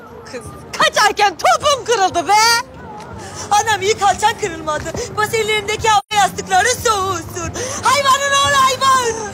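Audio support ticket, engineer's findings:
AAC frame loss with muting, 5.99 to 6.13 s. Symptom: a hole of about 130 ms, which fits three consecutive lost AAC frames, with sound fading out and back in rather than cutting. Component: AAC decoder error concealment. Mechanism: the missing frames' spectrum is zeroed, and overlap-add with neighbouring windows ramps the edges. Differentiator: unlike a buffer underrun or a hard sample dropout, the hole is soft-edged at both boundaries.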